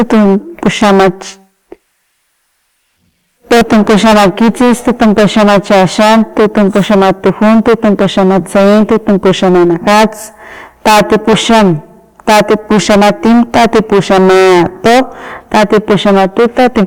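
From start to finish this speech is hard clipped, and pretty heavily. The level going into some stage was pushed about 23 dB past what it could pass, so the peaks get sliced flat, and roughly a fifth of the samples end up sitting on that ceiling. Those squared-off tops spray harmonics way up the spectrum, which is why every loud syllable comes out as a harsh, buzzy fuzz rather than just the odd crackle.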